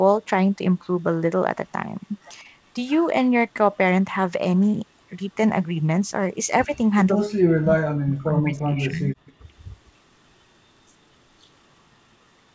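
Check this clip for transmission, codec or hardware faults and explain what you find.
Two faults stand out, both in the second half, heard over a band that stops at 8 kHz, which fits a G.722 call at 64 kbps.

Speech suppressed in double talk, 7.27 to 9.15 s: the talker's level collapses in pieces, as much as about 40 dB, for about a second and a half in total. The likely cause is an echo canceller that muted near-end speech while both sides talked. Unlike a network dropout, the cuts are gain dips, not glitches or repeated fragments.

Echo leak, 9.25 to 9.33 s: a faint copy of the voice, around 30 dB below it, returns 148 ms late, likely loudspeaker pickup the canceller failed to remove. Its fixed delay and brief scrap set it apart from room reverberation, which trails smoothly.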